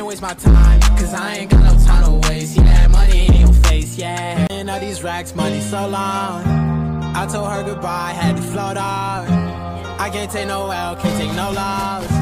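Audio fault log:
4.47–4.50 s CD skip: the laser jumped to another turn of the spiral, so playback mutes for about 30 ms, then resumes elsewhere. The waveform shows a flat gap with a sharp edge, and the spectrogram a thin broadband stripe where the material abruptly changes.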